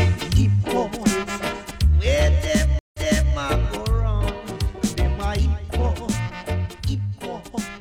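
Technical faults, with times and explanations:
2.79–3.36 s, stream reconnect: the link drops for 0.15 s of silence, then a fresh decoder resumes 0.42 s earlier, so that stretch repeats.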